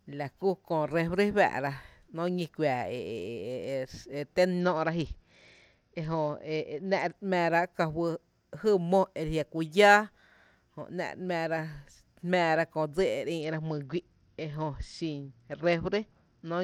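Speech that twice turns dull and gritty, from 4.60 to 7.15 s, just after "e té", and from 13.41 s to the end: a Bluetooth SBC bit pool drop, where starved upper sub-bands lose treble and coarse quantisation adds grain, which fits a fall from bit pool 28 to about 9, near 78 kbps.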